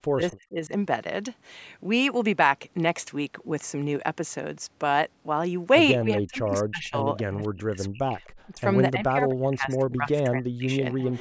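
Speech recorded through call processing, with two faults. Speech suppressed in double talk hits 0.0–0.72 s, 6.03–8.14 s, 8.53–8.6 s and 8.92–11.03 s. The voice dips by up to about 40 dB or cuts out in pieces. The likely cause is an echo canceller mistaking overlapping talk for echo and turning everything down. Echo leak appears at 0.31–0.36 s, 7.19–7.48 s, 8.24–8.3 s and 11.04 s to the end. These are faint delayed copies of the voice, roughly 258 ms late and well below the speech. They are likely loudspeaker pickup that the canceller failed to remove.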